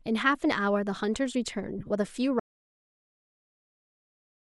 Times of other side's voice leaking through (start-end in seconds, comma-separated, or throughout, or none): none